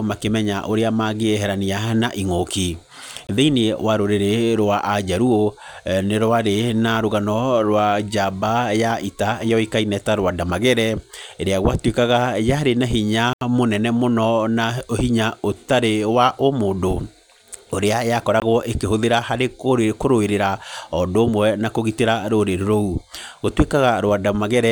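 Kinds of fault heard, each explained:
Bluetooth dropout: the speech cuts to silence at 3.27–3.29 s and 18.40–18.42 s (about 20 ms each, consistent with a single lost packet) and at 13.33–13.41 s (about 80 ms), then resumes further on, as if it had played through. Late wireless packets are the likely cause.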